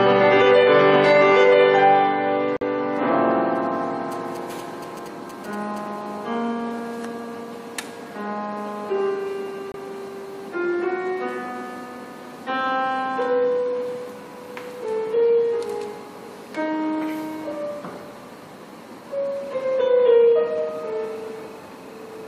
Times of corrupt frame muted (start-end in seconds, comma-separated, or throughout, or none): 2.57-2.62, 9.72-9.76